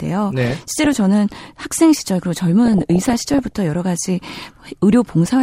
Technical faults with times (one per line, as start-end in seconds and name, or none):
0.41-1.00 DAB burbling
2.66-3.53 DAB burbling